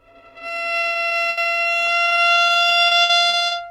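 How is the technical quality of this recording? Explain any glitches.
The quality is impaired by repeated packet loss (robotic sound) from 0.81 to 1.47 s and 2.05 to 3.53 s. Dropouts up to 80 ms are patched by stretching the preceding sound, making the audio choppy and robotic.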